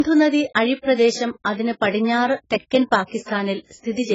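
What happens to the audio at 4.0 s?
At 4.0 s the speech has nothing above 7.6 kHz and sounds dull and smeared, as it does throughout the clip. The likely cause is low-bitrate audio saved at a high bitrate: a very low-rate first encoding stripped the detail, and the later high-rate MP3 preserved that damage. Unlike a clean low-pass filter, the band that remains is also smeared, not just dulled.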